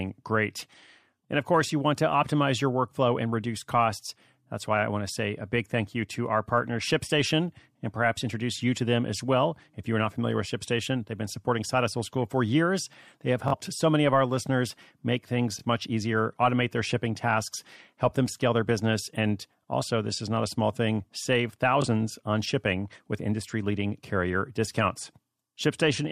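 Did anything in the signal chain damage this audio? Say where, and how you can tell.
Yes. Bluetooth stutter on the wireless link: the speech stutters briefly at 13.48–13.54 s before "so many of our", at 15.59–15.63 s after "of our listeners make", and at 21.82–21.86 s after "a small thing save". The receiver replayed its last buffer when packets went missing. Playback then resumed later, skipping about 43 ms, 21 ms and 21 ms, which fits two lost frames, then one each.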